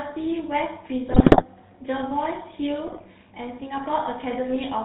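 From the start, the speech carries plainly audible GSM full-rate codec damage. Nothing passes above 4 kHz, and the pulse-driven vocal-tract model leaves a buzzy, gravelly roughness that fits the 13 kbps full-rate coder. Unlike simple band-limiting, the grit sits inside the voice itself rather than only dulling it.

From 1.08 to 1.45 s, and again from 2.87 to 3.08 s, GSM bit errors corrupt the decoder's filter, pitch and gain values, so the voice breaks into squawks, pops and gargling. Unlike packet-loss dropouts, the sound never goes silent. It warps and jumps in level instead.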